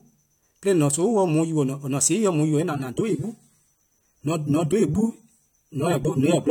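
At 2.59 s the sound suddenly drops in quality and stays that way to the end, at 6.51 s. That's an adaptive stream switching down to a lower bitrate, presumably because the connection slowed and the player grabbed a cheaper version. There's no gap at the switch, just a step change: the audio takes on a coarser, more processed texture, with nothing above about 19.5 kHz. It fits a move from roughly 96 down to 32 kbit/s AAC.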